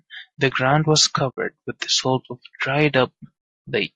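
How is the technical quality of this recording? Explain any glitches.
The technical quality is compromised by plainly audible codec damage throughout and one brief dropout.

Low-delay AAC compression, throughout: the speech sounds rough and grainy, likely from AAC-ELD at a low bitrate near 32 kbps. Its coarse quantization at that bitrate leaves noise between the harmonics.

AAC frame loss with muting, 1.30 to 1.38 s: the decoder zeroed the missing spectrum. The result is a soft-edged silent hole of about 80 ms, which fits four lost frames, fading out and back in.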